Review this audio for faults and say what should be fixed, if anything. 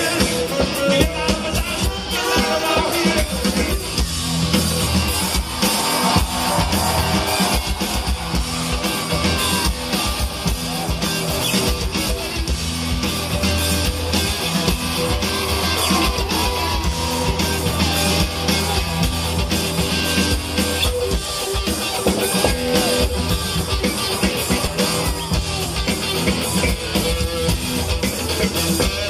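Damaged data in a compressed stream appears four times, at 8.71 s, 11.40 s, 19.11 s and 24.66 s, each lasting under 20 ms. At each point part of the encoded bitstream is corrupt, so the decoder cannot parse the affected frame, loses sync, and resumes only at the next valid frame header. The result is a brief disruption in the audio that sounds like a chirp, squawk, click or short gap. To prevent it, verify the file's integrity with checksums after transfer or storage, and re-encode from an intact source.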